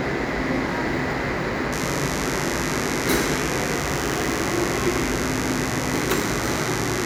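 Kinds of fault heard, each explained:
Mains buzz: sharp switching spikes leak into the signal path twice per 50 Hz cycle, building a dense ladder of harmonics that reaches into the kHz range. Here a steady, raspy buzz enters at 1.72 s and continues to the end, sitting only modestly below the audio.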